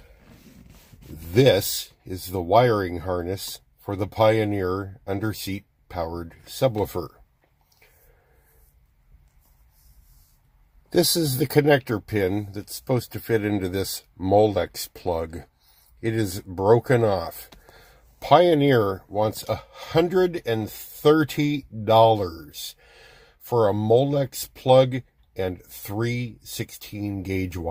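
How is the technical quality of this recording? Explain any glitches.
Nothing here glitches; the audio just runs along steadily with no dropouts, clicks or other technical hiccups to point to.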